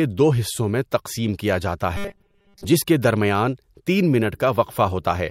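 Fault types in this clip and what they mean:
Robotic sound from repeated short buffers: audio likely arrived too seldom, so a 5 ms chunk kept repeating, turning the speech from 1.97 to 2.65 s into a rigid 200 Hz buzz.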